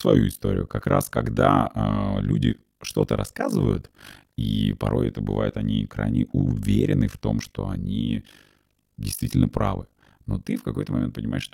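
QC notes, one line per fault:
throughout overlap-add ripple: frames overlap unevenly, so the level swings by about 60 dB around 50 times a second, a steady robotic flutter unlike irregular dropouts.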